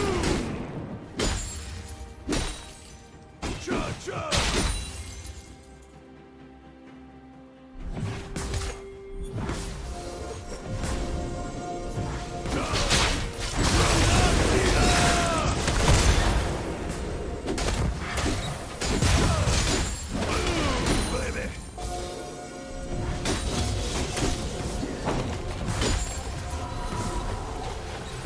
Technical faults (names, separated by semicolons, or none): none